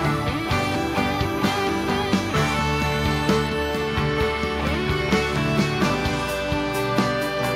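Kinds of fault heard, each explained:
No faults can be heard.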